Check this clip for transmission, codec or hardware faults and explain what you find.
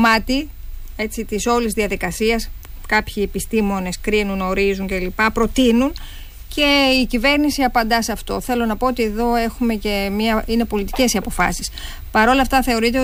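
Nothing in the signal points to a transmission, codec or hardware problem, and it holds steady throughout without dropouts, distortion or level disturbances.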